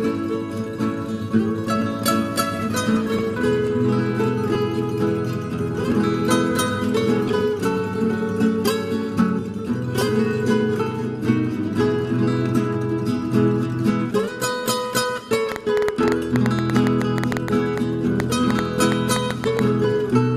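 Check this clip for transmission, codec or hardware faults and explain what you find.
One fault is present: a train of clicks near the end. It runs from 15.52 s to 19.6 s. Sharp ticks arrive about 6.6 times per second at an uneven pace, roughly thirty in all. Each has much the same shape and peaks around 15 dB above the sound. The likely cause is an external pulse source, such as interference from nearby equipment or a faulty connection or power supply. It is heard as irregular popping over the sound and in its pauses.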